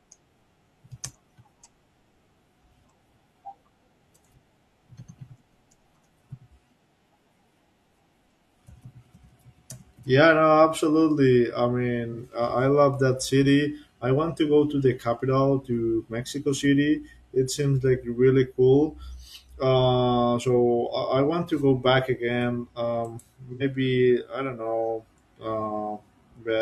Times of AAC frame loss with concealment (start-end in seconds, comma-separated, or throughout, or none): 12.13-12.17, 23.52-23.63